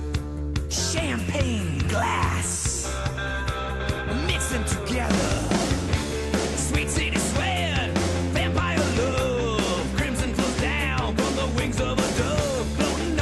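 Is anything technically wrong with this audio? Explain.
No, nothing is technically wrong with this audio.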